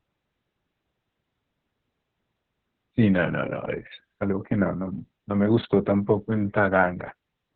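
Throughout the clip, Opus voice compression running its SILK speech coder at a very low rate, consistent with about 6 kbps, cuts the band to narrowband below 4 kHz and codes the excitation coarsely, so the speech sounds heavily muffled, hoarse and faintly robotic.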